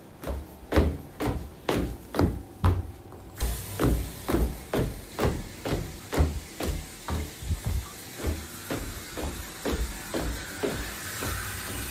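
A skip ahead occurs at 3.41 to 3.43 s. Roughly a second of audio never reaches playback, likely discarded when the jitter buffer overflowed while later material was already queued. Nothing fills the gap, so the sound on either side of the cut is butted together almost seamlessly. The listener hears an abrupt forward jump, a sudden change in the sound with no pause, as though a piece of the recording had been snipped out.

A jitter buffer speed-up follows from 4.26 to 5.57 s. The receiver's buffer holds more audio than its target, so it trims many tiny slices, each one or a few pitch periods long, back to back. Around 50 ms is shaved off across this stretch, making the sound run at about 104% speed while its pitch stays unchanged. The speed-up stays just under the point where the sound would start to seem hurried.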